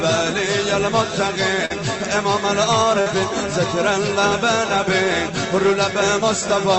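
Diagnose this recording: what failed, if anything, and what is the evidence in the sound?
What failed is the network: two short stretches of concealed packet loss, at 1.65 to 1.72 s and again at 3.02 to 3.08 s. Each gap is about 40 ms, which fits a pair of 20 ms Opus packets arriving too late for the jitter buffer. The decoder papered over each hole by extending the previous sound, voiced or noisy, then crossfaded back, so you hear a brief smear or wobble, with the codec's band limit near 8 kHz around it.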